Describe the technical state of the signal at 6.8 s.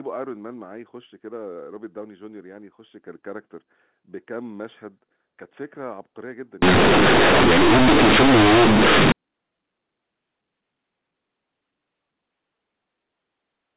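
At 6.8 s the speech comes with very loud, harsh, buzzy distortion, with heavy noise filling what should be quiet gaps, from 6.62 s to 9.12 s. This is companded audio read as linear: the A-law telephone bytes are being played straight as plain 8-bit samples without expansion, so every sign change throws the output across roughly half its range, quiet passages come out as loud as peaks, and the waveform is badly bent.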